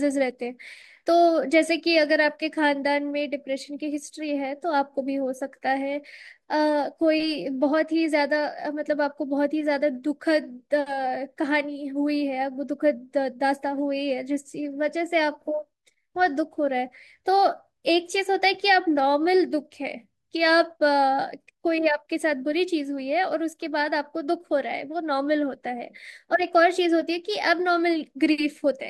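Nothing in this recording of speech stands out as a technical fault, so there's really nothing here to flag.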